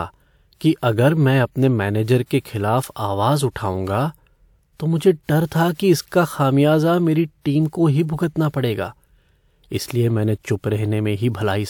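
At 5.74 s, just after "तो मुझे डर था", a burst of pre-echo runs for about 57 ms, to 5.79 s. A transform codec has quantised this stretch in one block and spread the coding noise across all of it, so noise scaled for the loud onset also fills the quiet gap ahead of it. The result is a short hiss arriving before the sound's attack, which then lands softened and smeared rather than crisp.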